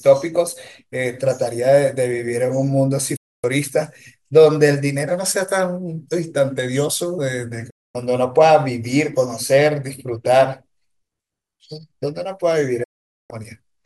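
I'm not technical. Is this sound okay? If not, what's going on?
No. Three times, at 3.16 to 3.44 s, 7.70 to 7.95 s and 12.83 to 13.31 s, the speech snaps to silence for a quarter to half a second. This is a digital broadcast dropout: the receiver briefly lost the signal and muted itself. Unlike a stall, the speech doesn't pause and resume; whatever was said during the gap is simply gone.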